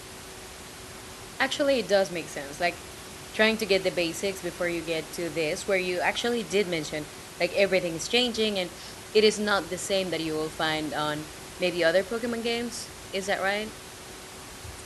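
No technical faults can be heard in the speech signal, and the only other sound is the room's own background noise, sitting about 15 dB below the speech as part of the original recording.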